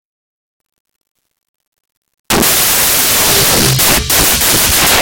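A music clip that collapses at 0.59 s into loud, harsh broadband noise lasting to the end. These are samples built from the wrong bytes: misassembled bytes push the rapidly fluctuating low-order bits into each value's most significant position.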